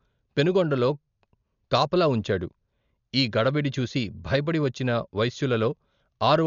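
From start to finish the speech sounds dull and boxed in, with nothing above 6.9 kHz, and a rough, fluttering noise clings to voiced sounds. The damage is heavy and is likely Dolby Digital compression at a starved rate, which fits a bitrate around 48 kbps. Short of bits, the encoder narrowed the band and left many frequency lines with no detail at all, and the decoder filled those gaps with dither noise, giving that grainy shimmer.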